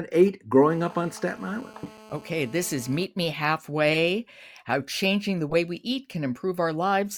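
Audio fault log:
0.70–3.04 s, GSM phone buzz: a nearby 2G phone on a call, bursting about 217 times a second, is rectified by the audio circuit, adding a steady, raspy, harmonic-rich buzz about 23 dB below the speech.
1.36–1.39 s, 3.94–3.98 s, 5.49–5.55 s, corrupt frame decoded: bit errors hit a few compressed frames that were still decoded, misplacing energy into brief blips, faint at first and much louder at the later two.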